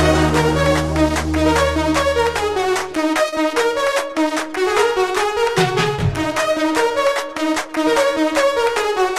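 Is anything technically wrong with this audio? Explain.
Yes, there are two short concealed packet losses, at 3.29 to 3.34 s and 5.96 to 6.00 s. Each time, about 20 ms of data arrived too late to decode, and the receiver covered the hole by extending the preceding sound for 27 ms and 19 ms respectively before blending back. Each is heard as a brief smear or wobble. Unlike a plain dropout, the sound never falls silent.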